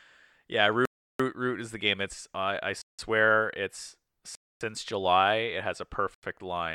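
Four blocks of digital silence cut into the speech: 0.85–1.20 s (341 ms) before "root is the game", 2.82–2.99 s (171 ms) after "I I", 4.35–4.61 s (256 ms), and 6.14–6.23 s (85 ms) after "has a". The output buffer likely went unfilled, so the sound drops abruptly to silence and back with no fade. The waveform shows dead-flat lines, and the spectrogram shows empty vertical bands with sharp broadband edges.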